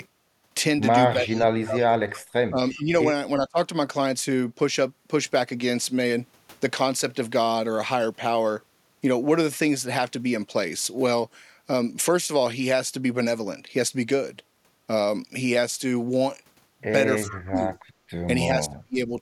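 Speech suppressed in double talk first appears from 1.14 to 2.04 s, and recurs at 2.49 to 2.92 s, 3.38 to 3.58 s, 17.26 to 17.77 s and 18.48 to 19.12 s. The speech sinks or breaks into fragments, by roughly 30 dB at its deepest, though only about 15 dB in the 2.49 s stretch. The likely cause is both parties talking at once, with the echo canceller unable to tell the local talker from loudspeaker echo and so turning everything down.

Echo leak overlaps these dips at 1.37 to 1.45 s, 2.71 to 2.79 s and 17.25 to 17.37 s. Each is a brief copy of the speech arriving 351 ms late, sitting about 15 dB below the direct speech in the first instance and about 20 dB below in the other two. This is likely a loudspeaker whose echo canceller let part of its microphone pickup through, returning that residue down the line as a faint, delayed scrap.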